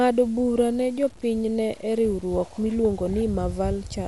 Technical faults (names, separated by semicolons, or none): low bit depth without dither; Dolby Digital compression